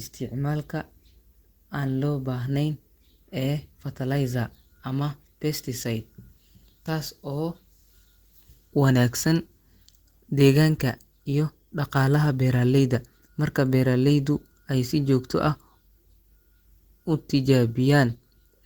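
Nothing stood out on listening to this speech recording.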